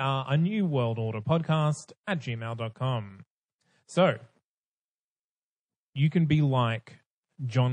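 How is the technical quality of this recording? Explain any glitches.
The recording carries clearly audible coding damage across its whole length, plus one distinct pre-echo glitch.

MP3 compression: The encoder was starved of bits, which fits a low bitrate around 40 kbps, and the likely cause is MP3 coding throughout. With so few bits, weak frequency lines drop in and out between frames. In this speech the result is plainly audible: a watery, swirly texture, metallic chirps on s sounds, and smeared consonant attacks.

Pre-echo: Just after "new world order podcast", at 2.04 to 2.07 s, the codec spread its quantisation noise across a whole transform block, about 52 ms long. It never switched to shorter blocks for the sharp onset. The noise sized for the loud attack therefore leaks into the quiet moment before it, rising about 15 dB over 34 ms. You hear a brief hiss ahead of the attack, which itself sounds soft and smeared.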